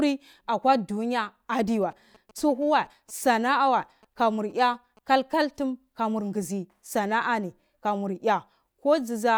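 From 1.82 s to 4.99 s, GSM signalling bursts break into the speech as a galloping dit-dit-dit of short buzzes at about 217 Hz, sitting well below the speech level. A nearby 2G phone is exchanging brief radio bursts with the network, and the audio circuitry rectifies them into sound. The rhythm is stuttering clusters rather than the unbroken drone of in-call GSM interference or the steady tone of mains hum.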